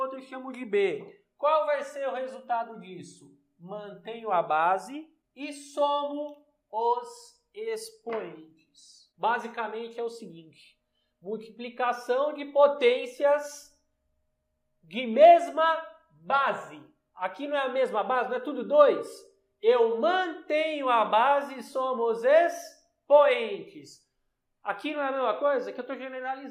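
At 6.38 s there's a single sharp click, a quick tick rather than anything that eats into the sound, and it shows up as a thin vertical line straight up the spectrum. That's dropped samples, likely a tiny gap where only a handful of samples, a fraction of a millisecond's worth, went missing from the stream. The waveform jumps from one value to a later one with nothing in between, and that sudden step is what you hear as the click.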